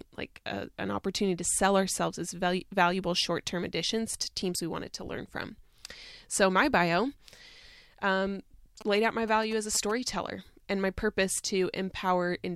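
From 8.81 to 9.92 s there are GSM signalling bursts: a nearby 2G phone's radio pulses get rectified, producing a galloping dit-dit-dit of short 217 Hz buzzes around 15 dB under the speech.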